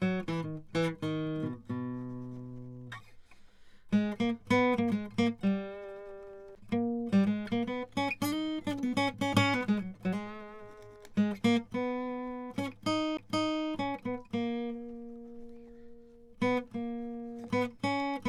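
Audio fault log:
6.55 s and 13.17 s, CD skip: at each point the music cuts out for a very short moment, about 10 ms the first time and closer to 15 ms the second. Each cut is heard as a small tick, and the music then resumes from a different spot. A knock or a flaw has made the laser jump onto another turn of the disc's spiral, so the player briefly mutes and picks up a whole number of revolutions away from where it left off.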